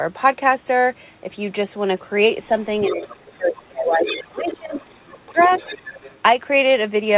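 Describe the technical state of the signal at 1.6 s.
At 1.6 s the speech is intact, with no fault present, only the expected narrow call bandwidth that tops out around 4 kHz.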